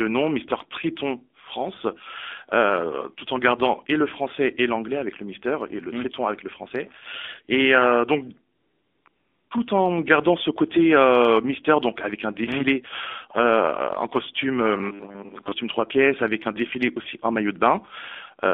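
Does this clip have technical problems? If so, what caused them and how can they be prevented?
Yes. The AMR narrowband mobile codec affects the whole clip. Sound is confined to about 250 Hz to 3.5 kHz, with a plainly buzzy, synthetic texture. The coding damage fits a low rate near 7.4 kbps. Prevent it by using a wideband codec or a higher AMR mode.

AMR comfort noise fills two gaps, from 8.56 to 9.06 s and from 9.08 to 9.50 s. The phone stopped sending speech frames. The receiver substituted smooth synthetic noise, which switches in and out abruptly. Prevent it by disabling discontinuous transmission or tuning voice activity detection.

Robotic sound from repeated short buffers runs from 14.77 to 15.52 s. A rigid metallic buzz at 100 Hz replaces most of the real sound. This likely comes from late audio delivery, with the last 10 ms repeated to fill time. Prevent it with a larger jitter buffer or better packet-loss concealment.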